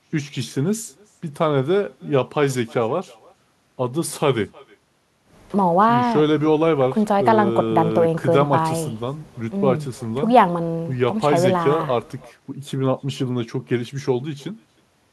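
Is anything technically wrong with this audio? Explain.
Yes. Throughout the speech there is echo with no canceller: the far end's loudspeaker feeds its microphone, returning each phrase roughly a third of a second later, about 27 dB down and thin. A spectrogram shows faint, delayed copies trailing every syllable; the waveform shows low ghost bursts after each phrase.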